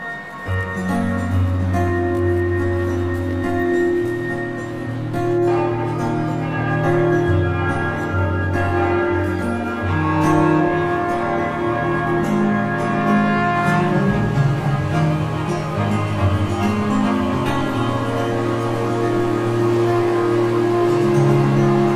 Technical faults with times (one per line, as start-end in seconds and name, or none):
0.00-21.95 channel delay (comb filtering)